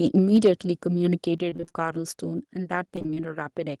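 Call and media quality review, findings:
Mic overload, 0.18 to 0.48 s: harsh crackle on the loudest syllables, peaks about 4 dB over the converter's limit with a few percent of samples flattened. Likely cause is the mic input gain set too hot, so the converter chops off the tops of the waveform.

Mic volume stepped down, at 0.37 s (about 3 dB) and 1.38 s (about 5 dB): abrupt level drops on speech and background together, the first landing right inside the clipped stretch. Likely the call software's auto gain reacting to a too-loud or clipping input by pulling the device input down in one step each time.

Repeated packet loss, robotic sound, 1.49 to 1.76 s and 2.96 to 3.22 s: choppy, robotic speech with bits missing. A run of short holes (longest 22 ms, then 24 ms) is patched by stretching the previous sound, so roughly half of each stretch is concealment rather than real audio.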